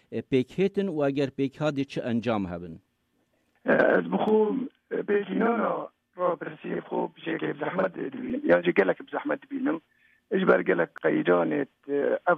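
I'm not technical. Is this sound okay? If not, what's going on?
No, not quite. Between about 4.28 and 8.30 seconds there's a channel delay, heard as doubling. One side of the stereo signal falls behind the other by about 46 milliseconds, which fits a 2048-sample buffer, and when both sides get mixed into one, you hear two copies of the same sound. The late copy arrives just as loud, so it comes across as a quick slap echo or a doubled, smeared sound for those four seconds.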